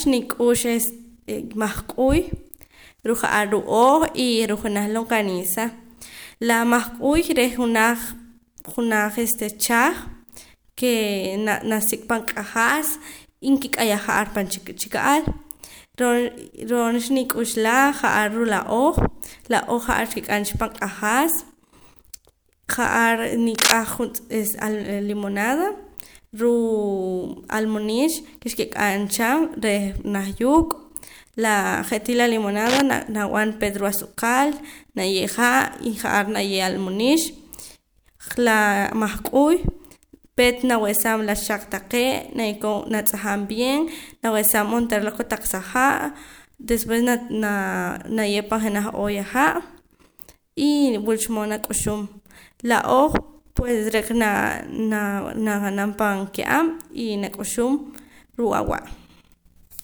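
Short bursts of dense, uneven scratching cut over the speech from 23.54 to 23.75 s, slightly louder than the speech, and again from 32.66 to 32.81 s, about as loud. This cable scratch noise likely comes from a worn lead or connector being moved.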